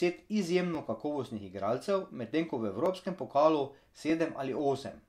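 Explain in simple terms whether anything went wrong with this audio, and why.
Repeated buffer at 0.75, 2.86 and 4.1 seconds: new audio arrived late, so the device replayed its last 10 ms chunk once, causing a quick click or brief buzz in the speech.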